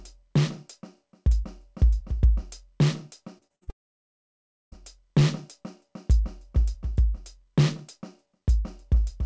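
From 3.38 to 3.70 s the music turns choppy and robotic: repeated packet loss, four short holes (longest 53 ms) patched by stretching the previous sound. Right after, 3.70 to 4.75 s, the music drops out and mostly goes silent for nearly a second, likely a long network dropout, before resuming further on, still band-limited to 8 kHz as the G.722 call path would have it.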